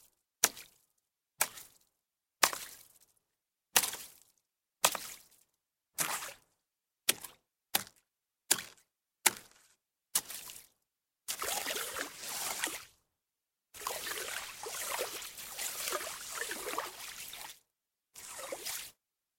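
No technical faults can be heard at any point in this recording of everyday sounds.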